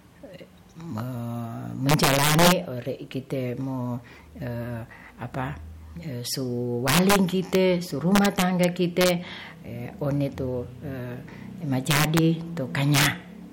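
Speech with integer overflow on its loudest passages: 1.89–2.52 s, 6.88–7.16 s, 7.55 s, 8.16–8.64 s, 9.01–9.10 s, 11.91–12.18 s and 12.94–13.06 s, driven up to about 11 dB past full scale. Peaks wrap to the opposite sign instead of flattening, so these are violent cracks rather than clipping's duller, buzzy distortion.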